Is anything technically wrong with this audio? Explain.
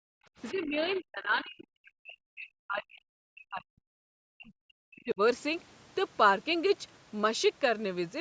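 Yes, there are two call-processing problems here.

Speech suppressed in double talk shows up at 0.00–0.07 s, 0.52–3.85 s and 4.33–5.20 s. The speech dips hard, around 40 dB at worst. It's likely the echo canceller mistaking overlapping talk for loudspeaker echo and ducking everything.

The other side's voice leaks through at 0.44–0.65 s and 0.83–0.99 s. These are faint scraps, roughly 25 dB under the talker. The likely cause is the echo canceller not fully removing the far-end audio that the loudspeaker plays back into the microphone.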